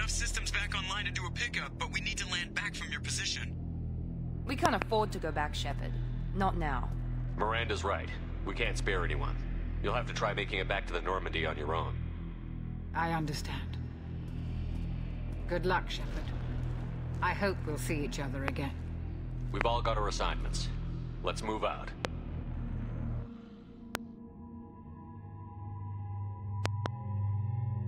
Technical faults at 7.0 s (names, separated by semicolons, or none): none